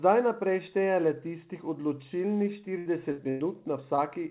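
Three bursts of packet loss cluster late in the speech: 2.78 to 2.87 s, 3.12 to 3.20 s, and 3.30 to 3.42 s. Each time, a run of audio arrived too late or not at all, so the receiver stretched the last bit of sound, letting it fade as the hole went on. You hear a short held buzz or fading hiss, about 75, 60 and 100 ms long, and then the speech picks up a little further along, with roughly 80, 60 and 100 ms of it simply gone.

About half a second later, at 3.96 to 4.00 s, there's a short concealed packet loss. About 20 ms never reached the decoder in time, and the gap got patched by continuing the previous sound and blending back into the real signal. It's just a quick smear or wobble. Everything sits in a band that stops at 4 kHz, which fits a 64 kbps G.711 mu-law call path.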